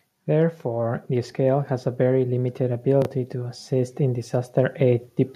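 From 0.62 to 1.77 s, automatic gain rising lifts the level by about 4 dB. The voice and background swell together before "a very limited".

At 3.02 to 3.06 s, chunks out of order occur. A 10 ms chunk plays three chunks late, causing a jumbled moment before "to assist in".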